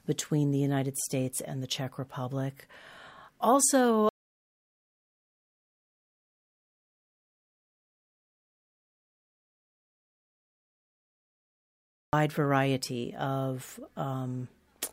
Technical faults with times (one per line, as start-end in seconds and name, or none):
4.09-12.13 audio dropout to silence